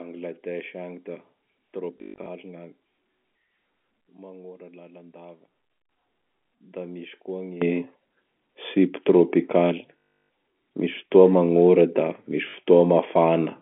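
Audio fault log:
1.98–12.54 s, packet loss with last packet repeated: at 1.98–2.26 s (180 ms lost across 280 ms, longest run 120 ms), 9.98–10.29 s (320 ms) and 12.50–12.54 s (40 ms), the receiver replays its last packet. The runs buzz near 50 Hz, which fits 20 ms packets.
4.01–5.89 s, sudden gain jump: sound and background noise drop together by about 9 dB at 4.01 s and snap back at 5.89 s, with no fade either way. The likely cause is a digital gain change applied from one sample to the next without a ramp.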